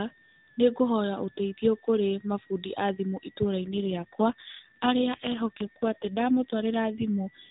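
An AMR rate drop runs from 3.62 s to 7.08 s. Partway through the speech, the mobile link appears to have weakened, so the network pushed the AMR narrowband codec down to a lower mode and spent the freed bits on error protection. The 4 kHz band and the continuity stay intact, with no gap, but the voice turns buzzier and more synthetic, which fits a step from 12.2 kbps down to 5.9 kbps, until the rate goes back up.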